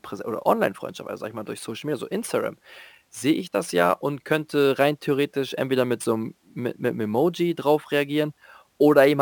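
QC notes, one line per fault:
Throughout, crude rate conversion: a gritty, inharmonic fizz rides on the speech, strongest on loud syllables and sibilant, high-frequency sounds, sitting roughly 25 dB below the voice. The grit follows a repeating pattern that fits a conversion from 32 kHz to 44.1 kHz done by simply repeating the nearest sample instead of filtering. The timing errors recur in a fixed cycle set by the two rates and create shifted, inharmonic copies of the speech.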